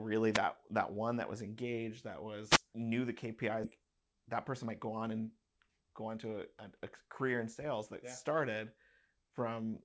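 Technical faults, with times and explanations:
0.33–0.39 s and 2.49–2.59 s, wireless microphone noise hit: Each is a brief swish of static over the speech. The analogue FM radio link faded as reflected signals cancelled. The receiver's own noise rose through the gap until the signal recovered.
3.64–3.66 s, skip ahead: Playback jumps forward with no gap filled. About a second of speech is simply missing. A stretch of audio was dropped while later audio was already waiting, so the two sides are spliced almost directly. The delay falls by roughly that second.
3.78–6.79 s, jitter buffer speed-up: The speech runs at 112 percent speed but keeps its pitch, so it sounds hurried. The buffer held too much audio. It trimmed many short pitch-period slices in a row, removing roughly 0.4 s overall.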